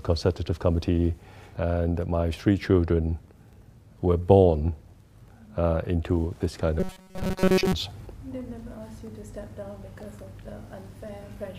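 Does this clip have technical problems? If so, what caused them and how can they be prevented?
Yes. From 6.80 to 7.73 s, new audio likely arrived too seldom, so playback kept repeating a short buffer of about 5.3 ms in place of most of the real material. This robotic sound from repeated short buffers comes across as a rigid, metallic 188 Hz buzz. A larger jitter buffer and a steadier, higher-priority audio feed would prevent it.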